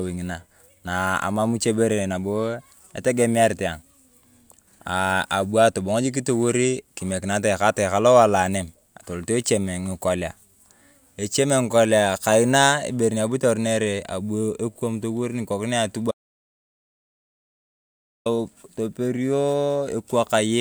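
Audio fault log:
16.11–18.26 s, audio dropout to silence: the speech cuts out mid-flow and the next 2.14 s is dead digital silence, not even room tone, before it snaps back in partway along. That flat silent floor is the giveaway: the input likely dropped out, maybe a loose connection, a failed link or an accidental mute, while the recorder kept writing silence, so whatever was said across that stretch is simply gone.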